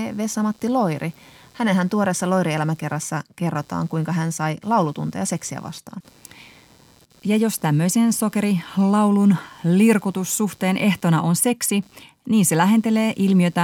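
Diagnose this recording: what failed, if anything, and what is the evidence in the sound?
Computer activity noise runs throughout the speech, in the analogue wiring: a buzzing, chirping pattern pulsing at around 150 per second, roughly 35 dB below the signal, varying with computer activity rather than the voice. Processor, graphics or mouse load currents are modulating the shared ground.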